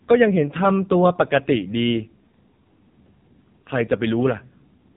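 From start to finish the speech has passed through the AMR narrowband mobile codec, squeezed to 8 kHz sampling at what sounds like one of its lowest modes, near 5.9 kbps. Nothing above 4 kHz survives, and the sparse pulse coding leaves the voice heavily buzzy, thin and synthetic.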